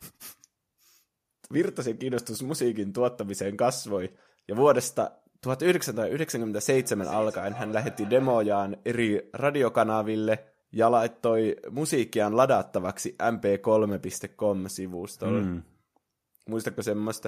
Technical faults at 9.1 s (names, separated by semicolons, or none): none